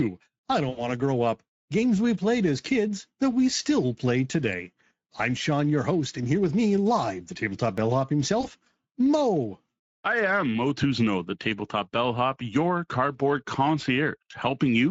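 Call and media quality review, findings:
Speex codec, whole clip: hoarse, noisy speech texture. This fits a mid-rate Speex mode around 16.8 kbps with a starved CELP excitation. The spectrogram shows smeared harmonics and a diffuse noise-like band above 4 kHz.

VoIP packet loss concealed by the speech codec, 0.69–0.88 s: stretched sound fading out for about 80 ms, consistent with four 20 ms frames. The decoder is extrapolating its last pitch and filter. The spectrogram shows flat repeated harmonics and the waveform a decaying envelope.

Same fault, 8.41–8.49 s: brief 20 ms stretch with a dip, about one frame concealed. The waveform shows a short tapered stretch and the spectrogram a momentary frozen spectral slice.

Tiny jump at 7.78 s, a very short piece of audio missing, likely a dropped buffer (overrun) splicing both sides directly. The waveform shows a discontinuity and the spectrogram a thin broadband vertical line.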